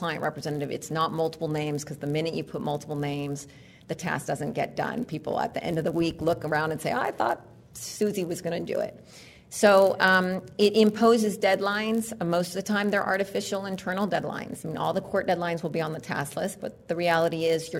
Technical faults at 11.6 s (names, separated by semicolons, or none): filter restarted on every block